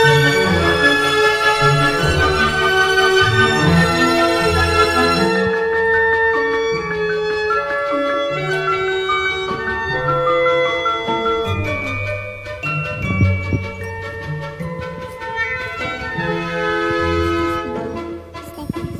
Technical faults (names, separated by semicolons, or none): wrong sample rate